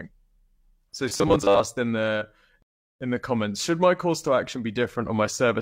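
From 1.09 to 1.61 s, just before "in the in the", the speech turns into a rigid, metallic buzz at 100 Hz. This robotic sound likely comes from repeated short buffers, with about half the audio replaced by 10 ms repeats.

At 2.62 s, after "in the", a rebuffering stall cuts to silence. Playback resumes at 3.01 s with "in the comments should", adding about 0.38 s.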